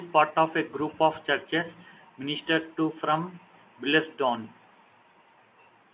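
No technical faults occur at any point in the speech, which is carried throughout over ordinary mu-law telephone coding at 8,000 samples a second.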